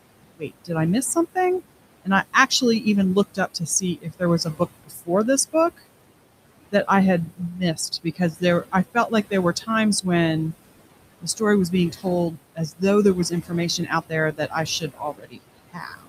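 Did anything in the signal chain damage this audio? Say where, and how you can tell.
Yes, and it's in the call processing stage, where the noise suppressor is working harder than it should. Noise suppressor artifacts run through the whole clip. The room noise, which sits about 13 dB under the speech, gets pulled down by about 21 dB in the gaps and then comes back up under the talking. The suppressor's per-band gains shift frame by frame.

The same suppressor also cuts into the speech itself, taking quiet parts of the voice for background and ducking them along with the noise. You can hear soft consonants, word endings or a quiet phrase go swallowed or faint at 0.37 to 0.71 s, just before "I miss something", then at 2.04 to 2.86 s, right after "I miss something". It happens again at 3.34 to 5.1 s, 7.26 to 9.69 s, 11.21 to 12.82 s (leading into "there was"), and from 13.3 s to the end. The drops reach about 19 to 22 dB, and within each of the first five stretches only part of it is hit, from about 0.15 s up to around 0.7 s in total.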